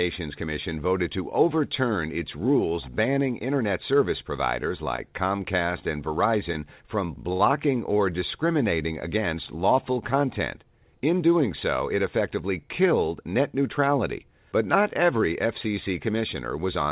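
At 7.33 to 7.41 s a packet in this speech arrived late and the jitter buffer ran dry, causing a short stall from a late packet. The receiver held the last sound for about 65 ms until the data turned up, then resumed from the same point, so nothing is lost. What you hear is a sound stretched unnaturally long, with a faint buzz or dip, and everything after it lands about 65 ms later. The band stops at 4 kHz, which fits G.711 on the call path.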